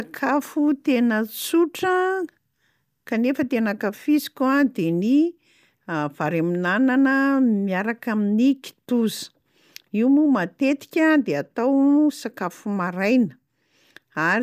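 Nothing in the speech stood out as a technical problem on listening.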